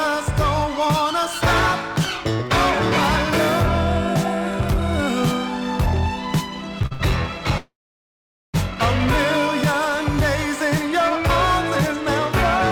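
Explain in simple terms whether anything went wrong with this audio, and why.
Two things went wrong. First, repeated stalls (stutter) from 6.79 to 7.02 s: data packets kept arriving late, so the receiver ran out of sound four times and stretched the last bit to cover, the longest gap about 68 ms, making the audio catch and drag.

Then a call audio freeze from 7.58 to 8.56 s, likely caused by packets being held up in transit. The sound is continued briefly, then drops to silence for about 0.8 s before resuming where it stopped, adding a pause with nothing lost.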